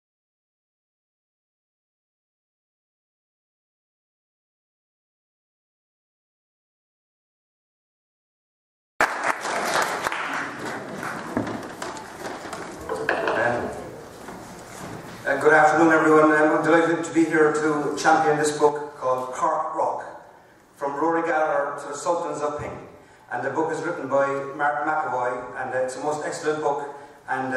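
The audio has a sudden gain jump at 18.69 s: the level drops by about 6 dB in a single step and stays there to the end, with the background noise falling in step. This is likely a digital gain change applied without any ramp.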